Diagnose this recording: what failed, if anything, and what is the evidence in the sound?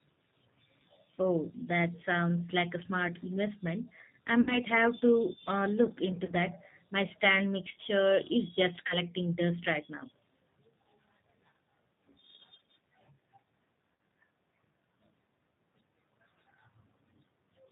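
Codec stage: throughout, the sound has that rough, slightly synthetic G.729 codec character with nothing above 4 kHz, which fits an 8 kbit/s VoIP link.

Network stage: VoIP packet loss concealed by the speech codec at 4.41–4.59, 6.25–6.33, 8.87–8.97 and 13.93–13.96 s. The decoder stretches the last sound into a buzzy tone or a coloured noise that fades.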